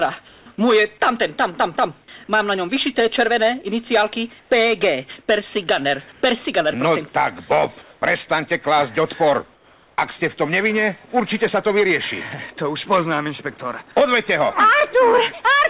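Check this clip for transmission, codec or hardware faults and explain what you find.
The quiet background is briefly replaced by comfort noise five times, all over a band that stops at 4 kHz, consistent with a narrowband G.711-style call codec. At 0.28–0.46 s, 4.4–4.5 s, 6.12–6.22 s, 7.82–8.02 s and 9.54–9.98 s the natural background turns smooth and featureless, mostly about 3 to 6 dB quieter, once about 2 dB louder. Likely cause: discontinuous transmission, with the receiver synthesising noise while the sender paused.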